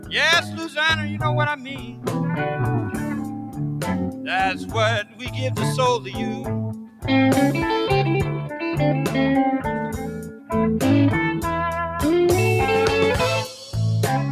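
Throughout the clip, a noise suppressor meant for speech is acting on sound it was never designed for. It treats sustained, steady content as noise and pulls it down, so the level swings by roughly 10 dB as the processing clamps and releases. The result is a fluttering, thinning texture. Unlike a compressor's pumping, which follows loud peaks, this dips on the quiet, held parts, while sharp onsets pass through largely intact.

Sound is cut by the noise suppressor in five stretches: 0.00–0.76 s, 1.56–2.09 s, 2.87–5.35 s (the longest, with about 1.5 s affected in total), 5.99–7.04 s and 9.97–10.50 s. In each, the sustained or decaying material sinks by up to about 9 dB, and tails are truncated rather than fading naturally. A dropout or gate would silence everything abruptly, but here attacks survive and only what lingers after them is eaten away.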